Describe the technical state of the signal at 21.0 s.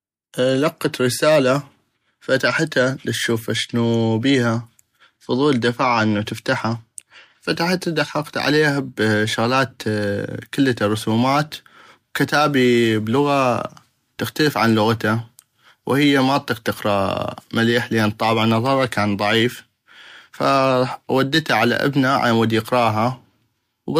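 At 21.0 s the speech carries crude rate conversion, present from 7.55 s to the end. Samples are picked by nearest position without filtering, which points to a 48 kHz to 44.1 kHz change. The result is a gritty, inharmonic fizz roughly 30 dB below the speech, tracking its loud, bright parts. A spectrogram shows faint, non-harmonic lines and haze alongside the voice harmonics.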